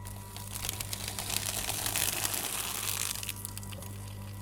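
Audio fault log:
1.39 s and 2.68 s, repeated buffer: each time the next block of audio did not reach the output device in time, so the device played its previous block once more. A piece about 11 ms long, which fits a 512-sample buffer, sounds twice back to back with a hard join. Because the repeated piece is so short, it comes across as a brief click or tiny buzz rather than an obvious stutter, and nothing after it goes missing.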